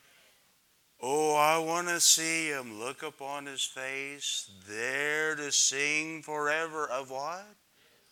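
No audible technical faults were found on listening, so there are no event times or causes to report.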